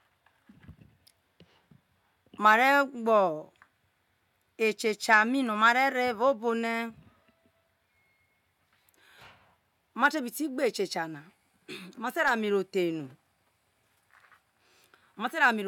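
No technical faults can be heard anywhere in the recording; the speech signal stays continuous and intact throughout, with nothing in it pointing to a problem in capture, transmission or playback.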